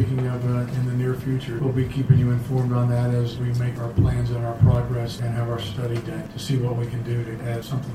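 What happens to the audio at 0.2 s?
Nothing goes wrong at 0.2 s; the audio plays through that moment intact, with no dropout, click or distortion.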